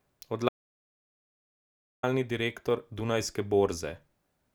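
A short speech recording with an audio dropout to silence running from 0.49 s to 2.03 s, a stretch of about 1.54 s. The speech cuts off abruptly and resumes just as abruptly, and the gap in between is silent with no room tone underneath. The likely cause is the input being lost for that interval, through a disconnected device, a broken link or an accidental mute, while the recorder kept writing blank samples, so whatever was spoken there is unrecoverable.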